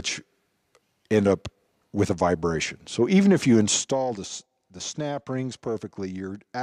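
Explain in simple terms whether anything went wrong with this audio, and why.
Between 3.74 and 4.09 s you can hear zipper noise. The level gets turned down in small jumps, about forty a second, instead of one smooth fade. Each jump leaves a tiny click, so the drop comes out as a quick ticking, zipping sound.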